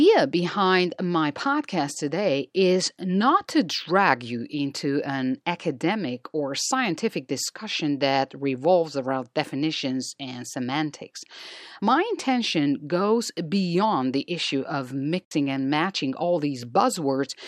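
At 15.25 s the speech drops out abruptly, and the sound returns at 15.32 s. This is a digital broadcast dropout. The receiver stopped getting usable frames, either because the signal was lost or because frames failed their error check. It muted its output until valid data arrived again. The hole lasts 64 ms, which fits two lost frames. Whatever was transmitted in that gap never reaches the listener.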